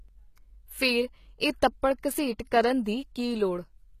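All the way through, the speech's sibilants sound gritty and plainly metallic, with nothing above 14.9 kHz. That's likely HE-AAC compression: the top band is rebuilt from copied lower bands rather than coded, which points to a bitrate around 20 kbps.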